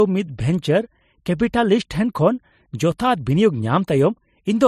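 A short speech clip with one fault running through it from start to finish. The sound carries two sets of coding artefacts at once. Low-bitrate smearing and swirly pre-echo sit under a second layer of grainy, warbling detail. Nothing is left above 14.3 kHz. The likely cause is transcoding between lossy codecs. The pattern points to an MP3 near 38 kbit/s re-encoded as AAC-LC near 83 kbit/s. The higher second bitrate cannot restore what the first pass discarded. It spends bits preserving the old damage and adds its own.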